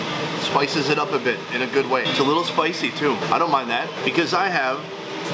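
No technical faults are audible.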